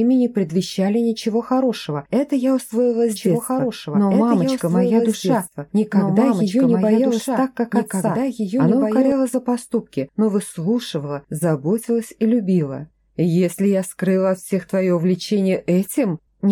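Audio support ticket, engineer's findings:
Doubled audio track, 3.16 to 9.12 s. Second full-band copy trails by about 2 s, roughly 5 dB down, no decay. Likely a slower duplicate capture path.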